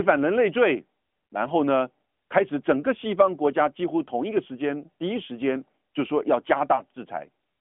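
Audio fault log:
6.76–6.81 s, lost AMR speech frame: one 20 ms frame failed its checksum, so the decoder filled the gap by repeating the previous frame's pitch and vocal tract settings at reduced gain. This produces a brief dip or warble, and the voice comes back weak or rough for a moment. On the waveform the envelope sags for roughly one frame. On the spectrogram the harmonics smear flat and dim across that slice, within the narrowband 200 Hz to 3.4 kHz line band that runs through the clip.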